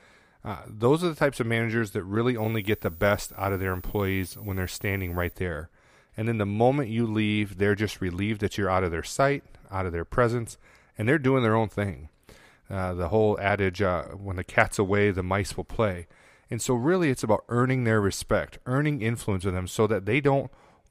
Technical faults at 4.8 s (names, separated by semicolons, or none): switching supply whistle